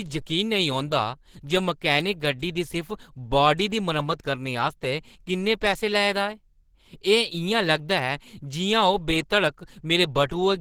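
Opus compression runs throughout this speech clip, and it is plainly audible: the sound is grainy, rough and hoarse rather than swirly. That texture points to Opus working in its hybrid mode, which likely comes from a low bitrate around 16 kbps. Speech-oriented coding handles the lower band, while the upper bands are filled by folded or noise-like content. The bandwidth still reaches about 20.2 kHz, so the damage is coarse texture, not a narrowed band.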